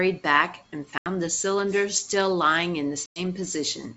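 Packet loss on an ADPCM call cuts holes at 0.98 to 1.07 s and 3.06 to 3.20 s, about 80 and 100 ms of missing speech. Each gap is silent with hard edges. After each, the decoder's predictor is out of step, so the speech returns slightly distorted before settling.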